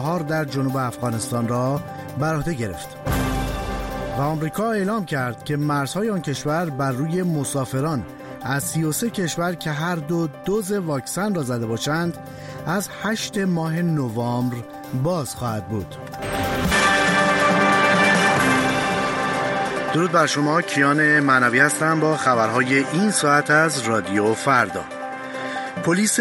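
From 16.72 s the sound dulls abruptly, losing everything above 11.4 kHz, shifting level and gaining faint new noise: likely an input switched to a poorer device.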